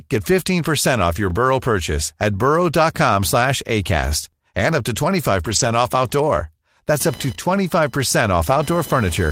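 Speech, with three kinds of fault. Overlapping chunks: the audio was handled in blocks about 3 s apart, each starting 23 ms before the previous one ended, so that sliver plays twice at each join. The result is a short stutter-click at 1.30 s (just after "off your"), at 4.33 s (just before "and up to") and at 7.35 s. A lost packet rebuilt from error correction: packets went missing and the decoder filled in from the lower-quality backup copies carried in the following packets. There is no gap, but the sound turns rougher and noisier from 5.43 to 5.69 s, between "and up to" and "off outdoor", and again from 8.49 to 8.59 s. The first stretch fits several separate lost packets. Computer activity noise: processor or peripheral load is disturbing the audio circuit's shared ground. From 7.0 s to the end, this adds a buzzing whine near 1 kHz, about 20 dB below the speech, that follows the machine's activity rather than the speech.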